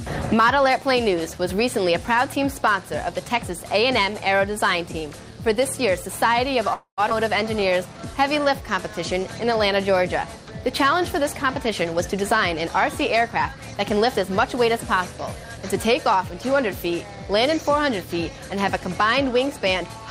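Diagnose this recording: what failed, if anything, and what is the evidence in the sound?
At the network and jitter-buffer stage, packets were likely held up in transit and the buffer ran dry, producing a call audio freeze. From 6.73 to 7.01 s the last sound is stretched into a fading fill for about 0.24 s, ending in roughly 0.1 s of silence, before the audio resumes with nothing lost.

Right after, a stretch of audio was dropped, a skip ahead. Between 7.10 and 7.13 s, playback jumps forward with almost no gap, dropping about a tenth of a second. The material on either side is spliced nearly directly together.

From 7.60 to 9.45 s, the jitter buffer was rebuilding its reserve, causing a jitter buffer slow-down. It repeated single pitch periods many times over, adding 112 ms. The audio plays at 94% speed with unchanged pitch, so sounds are drawn out.

Later the buffer held more audio than its target, and the receiver trimmed short pitch-period pieces, a jitter buffer speed-up. 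From 11.84 to 12.37 s the audio runs at 114%, losing roughly 70 ms, and sounds hurried at the same pitch. From 13.21 to 16.40 s it runs at 104%, losing roughly 150 ms, at the same pitch.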